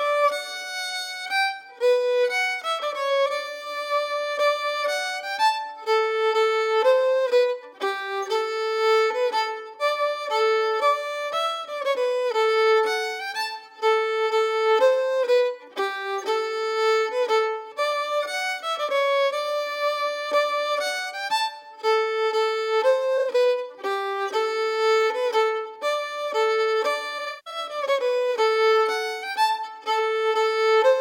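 At 23.17 to 23.35 s and at 27.18 to 27.58 s, AAC frames are lost. The decoder conceals them by reusing the last good spectrum. The first patch sounds briefly smeared and noisy. The second has a longest gap of about 150 ms and sags toward silence before fading back.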